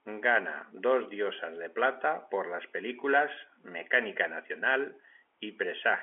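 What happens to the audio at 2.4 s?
At 2.4 s the speech passes through intact, with nothing breaking into it beyond the narrow telephone band of G.711 coding, which carries the voice only up to about 3.4 kHz.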